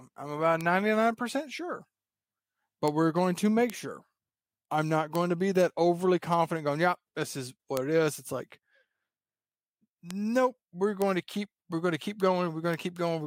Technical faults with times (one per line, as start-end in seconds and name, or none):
0.61 bit error spike
2.88 bit error spike
3.70 bit error spike
5.15 bit error spike
7.77 bit error spike
10.11 bit error spike
11.02 bit error spike
12.74 bit error spike